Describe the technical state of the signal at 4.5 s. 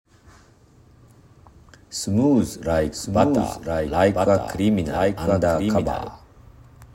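At 4.5 s a doubled audio track runs, from 2.92 to 6.10 s: a second copy, a few dB quieter and about a second behind, likely from a slower capture path.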